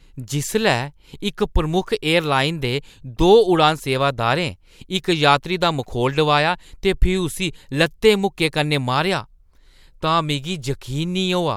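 No technical faults are audible at any point in the speech recording.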